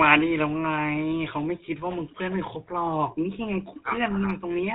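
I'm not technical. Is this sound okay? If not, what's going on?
No, it's been squeezed through the GSM full-rate codec, the old mobile-phone format, for the whole clip. That's why the speech sounds buzzy and gravelly, and why nothing crisp comes through above about 4 kHz. The damage is plainly audible throughout.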